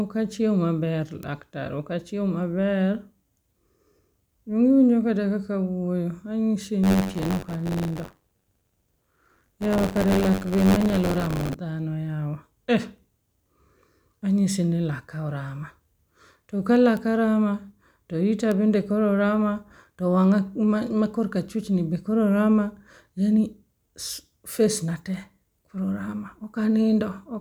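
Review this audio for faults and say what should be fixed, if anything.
Bit error spike: single sharp ticks at 1.23 s, 16.97 s and 18.52 s, each a sample or two jumping by a power of two and snapping back. On a waveform they are lone needles; on a spectrogram, thin full-height vertical lines. Use error-checked links and memory.

Buffer tearing from 6.83 to 11.55 s: a robotic 93.8 Hz buzz over the speech, which fits a 512-sample buffer. About a tenth of each buffer replays audio roughly 40 ms old, with hard joins. The spectrogram shows evenly spaced vertical seams; the waveform shows repeated discontinuities. Enlarge buffers and fix read/write pointer synchronisation.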